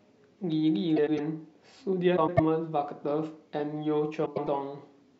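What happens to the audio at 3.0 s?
Nothing goes wrong at 3.0 s; the speech carries straight through that moment with no dropout, click, glitch or other fault.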